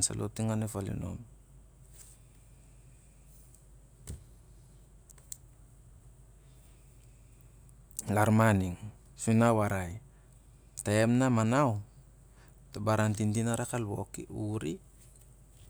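Nothing stood out on listening to this speech recording.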